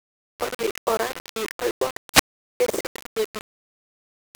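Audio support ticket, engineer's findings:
Low bit depth without dither, throughout. Gritty, grainy distortion tracking the speech, heavy on quiet passages and decays, with the quietest parts sputtering or dropping out. Likely a 5-bit requantisation with plain rounding, no dither. Error roughly 10 dB below signal.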